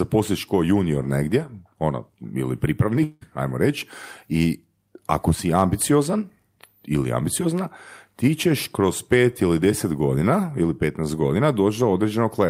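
At about 3.03 s the speech drops out for roughly 0.2 s, until 3.23 s. The receiver fills the hole by stretching the last bit of sound into a short buzzy smear, so there's no dead silence, just that brief synthetic tail. When the speech picks up again, about 180 ms of it is gone. It's a long network dropout, most likely packets that never arrived and were papered over by concealment.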